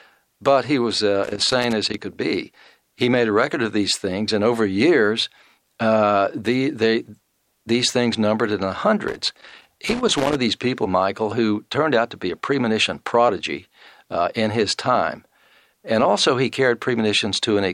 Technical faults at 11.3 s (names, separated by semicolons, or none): none